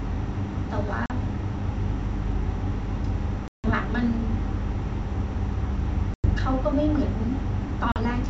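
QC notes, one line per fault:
1.06–1.11 s, 3.48–3.69 s, 6.14–6.29 s, 7.92–7.98 s: packet loss on an ADPCM call. Runs of packets went missing (about 40, 160, 100 and 40 ms of audio) and were filled with silence, so each gap cuts in with a hard edge. Because the decoder's adaptive predictor and step size drifted from the sender's, the speech comes back with brief, slight distortion before settling. Between gaps the G.722 wideband sound stays clear.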